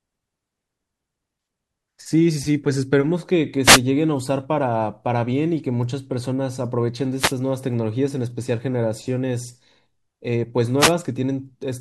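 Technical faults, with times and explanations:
3.63–3.80 s, 7.17–7.34 s and 10.79–10.92 s, wireless microphone noise hits: three short bursts of static, each under 0.2 s and spaced roughly 3.6 s apart, swish over the speech. The FM radio link from the mic briefly faded as reflected copies of the signal cancelled the direct one, so the receiver's own hiss jumped up before the signal recovered.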